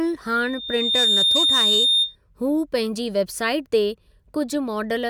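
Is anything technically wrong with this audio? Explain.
Yes. From 0.39 to 2.16 s, ending just before "हूअ पंहिंजी", there is loudspeaker feedback squeal. The microphone re-amplifies its own loudspeaker, so a 3.6 kHz tone swells within a second to about 5 dB above the speech. On a spectrogram it shows as a bright horizontal line.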